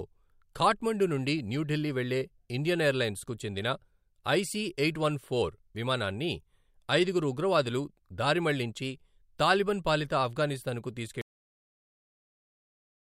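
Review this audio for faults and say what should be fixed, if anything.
The speech has a cut-off end: right after "తాలిబన్ పాలిత అఫ్గానిస్తాన్ కు" at 11.21 s, the audio stops mid-sound and drops straight to digital silence with no decay. The final buffers were never written, leaving dead silence through the end. Flush and close the recording or export path fully before finalising the file.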